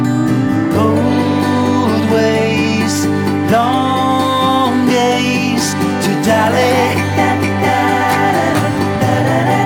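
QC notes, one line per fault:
No faults heard; nothing to log.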